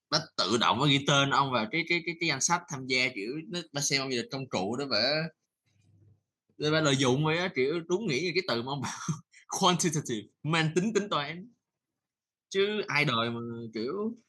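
No technical faults can be heard anywhere in the speech recording. The audio continues without any interruption or disturbance at any point.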